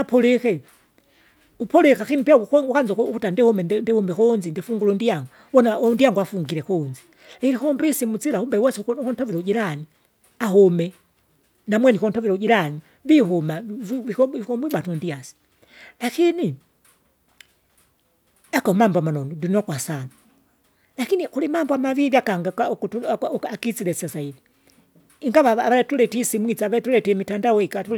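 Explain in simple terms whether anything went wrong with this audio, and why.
Nothing went wrong: the speech holds steady throughout, with nothing audibly amiss at any point.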